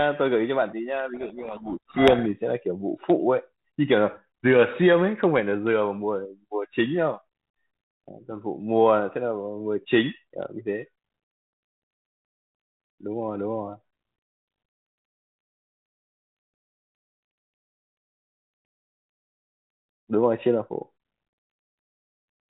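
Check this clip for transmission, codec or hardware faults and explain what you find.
One fault is present: a codec payload misread from 1.14 s to 2.31 s. The speech travels over G.726 ADPCM at 32 kbit/s, and in this stretch the sender and receiver disagree on the bit order of each G.726 code word. The decoder therefore reconstructs its adaptive difference signal from scrambled values, and the speech is buried under harsh, grinding distortion for just over a second. Clean decoding returns at 2.31 s, once both ends agree on the packing again.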